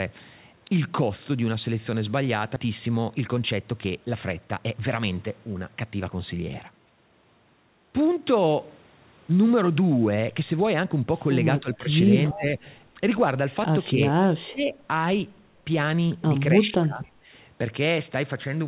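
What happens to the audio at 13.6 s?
At 13.6 s the speech carries on intact, with only the narrowband sound of the call path, which has nothing above 4 kHz.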